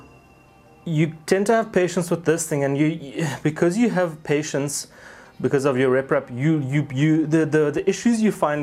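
Nothing in the audio points to a technical fault at any point, with the signal intact and no interruptions or distortions that would suggest trouble in the recording or playback chain.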